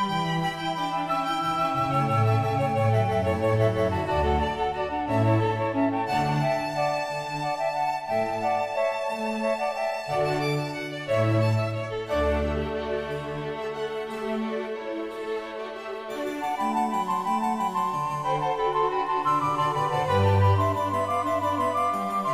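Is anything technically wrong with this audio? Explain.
No, nothing technically wrong turns up anywhere in this recording.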